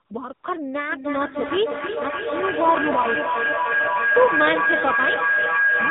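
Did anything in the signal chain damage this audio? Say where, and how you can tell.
Yes. AMR narrowband mobile codec damage runs through the whole clip at the codec stage. Nothing above 4 kHz survives, and the speech sounds plainly buzzy and synthetic because a vocal-tract model driven by sparse pulses rebuilds it. That degree of damage points to a low bitrate of about 7.4 kbps.

AMR comfort noise appears at 0.06–0.10 s and again at 0.34–0.44 s, during call processing. In these 40 ms and 100 ms stretches the real background gives way to smooth, steady synthetic noise that switches in and out. The sender stopped transmitting speech frames, and the receiver filled the gaps.

Feedback howl starts at 0.89 s and lasts to the end. A tone around 1.5 kHz builds until it reaches about the level of the speech, and the loop repeats roughly every 0.3 s. That pattern shows a microphone-to-loudspeaker loop between two devices, regaining level on every trip.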